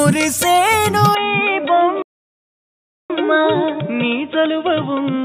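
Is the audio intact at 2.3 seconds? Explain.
No. At 2.3 s the audio is silent, inside a playback stall from 2.02 to 3.10 s, most likely the player running short of data. The output stops for about 1.07 s, appearing as a flat waveform gap.

The moment also falls within a switch from 1.15 s to the end, likely to a poorer input device. From there the sound turns dull and slightly quieter, with a narrower band.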